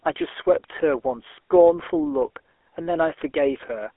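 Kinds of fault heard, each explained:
GSM full-rate codec: The speech runs through the early mobile-phone vocoder, which models the vocal tract as a filter and excites it with a sparse, regularly spaced pulse train instead of the real signal. That coarse excitation gives the plainly audible buzzy, gravelly roughness heard throughout, consistent with a 13 kbps stream. The sound is confined to a telephone band of about 300 Hz to 3.4 kHz, with nothing present above 3.6 kHz.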